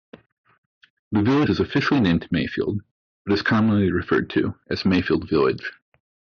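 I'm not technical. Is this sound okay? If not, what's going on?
No. At 1.45 to 1.47 s, just before "is officially named", some compressed frames are skipped. A few frames of roughly 23 ms each, about 70 ms of speech, are lost, so the sound jumps ahead. Unlike a dropout, there's no silence; the speech just jumps forward.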